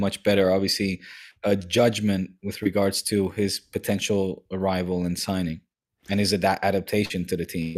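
At 2.63 to 2.67 s, between "obviously a judgment with" and "to his potential arrival", a short concealed packet loss leaves a brief smear: about 20 ms of audio arrived too late, and the decoder extended the preceding sound before blending back. A second, longer loss at 7.05 to 7.12 s, about 40 ms, leaves a brief smear or wobble. On a spectrogram, each shows as a short stretch that continues the preceding sound, as repeated harmonics if it was voiced or as shaped noise if not.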